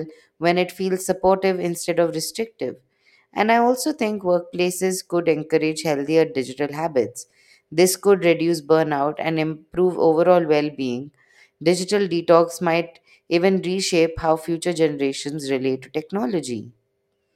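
No technical faults are audible anywhere in the speech recording.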